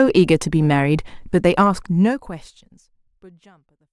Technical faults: none

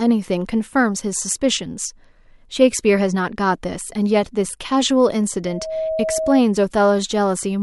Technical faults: loudspeaker feedback squeal

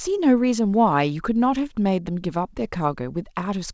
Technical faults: none

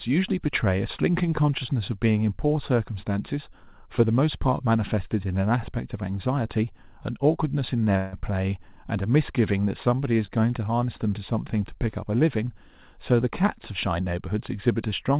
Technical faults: short stall from a late packet; call audio freeze

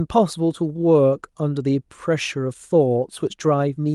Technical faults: none

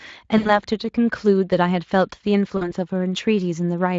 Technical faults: VoIP packet loss concealed by the speech codec

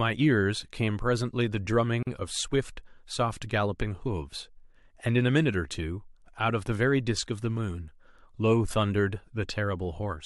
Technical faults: gap at a join of encoded pieces

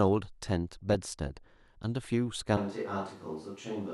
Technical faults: DAB burbling; switch to a distant microphone

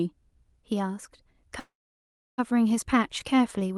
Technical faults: call audio freeze

